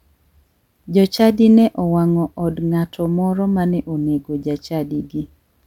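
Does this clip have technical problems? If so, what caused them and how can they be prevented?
No, this clip has no technical problems, so there is nothing to trace to a cause or to prevent.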